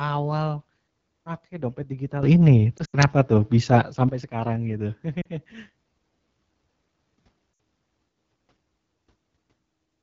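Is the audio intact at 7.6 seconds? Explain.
No. From 7.53 to 7.59 s the speech drops to near silence within two frames, and at 7.6 s it is only just returning, weak or rough. These are lost AMR speech frames. A 60 ms gap, which fits three 20 ms frames, failed on the radio link, so the decoder repeated the last good pitch and vocal tract settings with falling gain. The sound at that moment is also rough and raspy, as it is throughout, from the AMR wideband (HD Voice) codec running at 8.85 kbit/s. That is the second-lowest rate, too low for its pulse-driven vocal tract model to reproduce speech cleanly up to 6.4 kHz.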